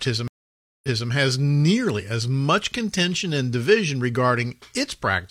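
From 0.28 to 1.09 s the speech drops into about 0.56 s of dead silence, then picks up again roughly 0.26 s earlier than where it broke off, just before "has nearly as much". This is a stream reconnect: the link failed and a new decoder started mid-stream. The waveform shows a flat gap followed by a soft fade-in.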